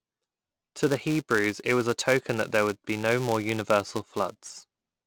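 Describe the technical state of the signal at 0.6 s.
At 0.6 s the speech carries a steady buzz at 375 Hz, rising and falling with its level. That's a filter restarted on every block, running the whole clip: each block starts from silence with a small transient, which fits 128-sample blocks.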